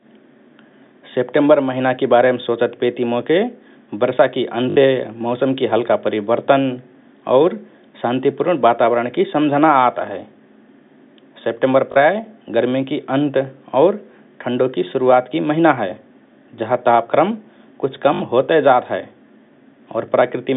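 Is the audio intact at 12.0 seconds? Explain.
Yes, but only just: packet loss with last packet repeated ends at 11.96 s. Audio dropped from 11.92 s was filled by replaying the previous packet, giving a brief robotic stutter.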